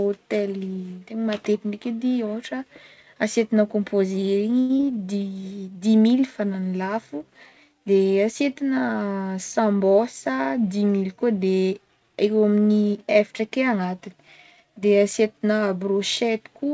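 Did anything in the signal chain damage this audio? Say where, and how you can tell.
Yes. At the network jitter buffer, a short stall from a late packet at 4.60 to 4.71 s emptied the buffer, so the speech is held for about 94 ms before resuming.

Short concealed packet loss at the network stage left a 40 ms hole at 4.77 to 4.81 s. Concealment patched it by extending the preceding sound, giving a brief smear.

A jitter buffer speed-up from 9.59 to 10.69 s trimmed pitch periods to shed about a tenth of a second, so the speech runs about 9% faster at unchanged pitch. Nothing above 8 kHz is present, which fits a G.722 call codec.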